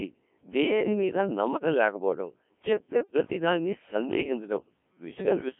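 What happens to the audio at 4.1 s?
At 4.1 s you're hearing the same Codec 2 vocoder damage that runs through the whole clip. The decoder isn't passing the waveform through; it rebuilds the speech from sine waves using just pitch, voicing, energy and a rough spectral envelope. So it comes out robotic and buzzy, squeezed into a 200 Hz to 3.4 kHz line band with nothing above 3.5 kHz, and the heavy smearing fits a very low rate around 1.3 kbit/s.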